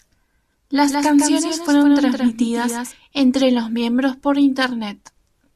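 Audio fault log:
0.88–2.92 s, doubled audio track: a second full-band copy of the speech trails around 150 ms behind, some 5 dB quieter, likely from a slower capture path. Unlike echo it has no decay or room colour, and it starts abruptly just before "entre los miembros por" and stops abruptly.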